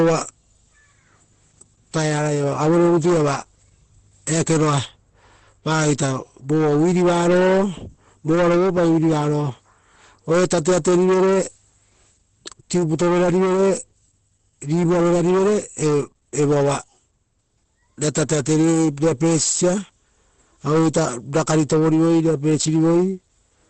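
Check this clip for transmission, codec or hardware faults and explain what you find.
One codec fault is present across the entire clip. Opus compression, throughout: likely Opus in its SILK speech mode at a low rate fitting roughly 12 kbps, so nothing remains above 8.6 kHz and the speech sounds heavily muffled and hoarse.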